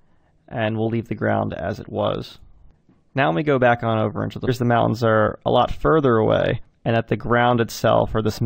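At 4.47 s and again from 6.61 to 6.63 s, damaged data in a compressed stream produces brief garbled blips as the decoder misreads corrupted frames and hunts for the next valid header.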